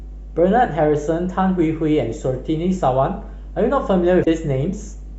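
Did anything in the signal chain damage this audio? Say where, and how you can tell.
Yes. In the analogue wiring, mains hum sits under the speech for the whole clip: a steady 50 Hz tone, fairly strong at roughly 15 dB below the speech. It is likely a ground loop or a nearby transformer coupling the power line in. Its fixed pitch and constant level set it apart from broadband rumble or handling noise.

At the codec or storage stage, damaged data in the compressed stream produces a short glitch from 4.21 to 4.28 s, lasting about 60 ms. The corrupted frames throw the decoder out of sync until it finds the next frame header.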